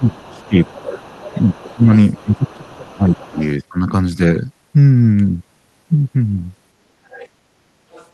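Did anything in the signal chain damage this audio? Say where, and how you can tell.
Yes. From 0.0 to 0.81 s and 1.42 to 3.39 s the speech dips by roughly 20 dB. This is speech suppressed in double talk, likely call-processing echo cancellation turning down both talkers.

A second, fainter voice leaks through from 0.19 to 3.48 s, about 20 dB down, with scraps at 7.1 to 7.28 s and 7.92 to 8.07 s. This is the other side's voice leaking through, likely residual loudspeaker echo.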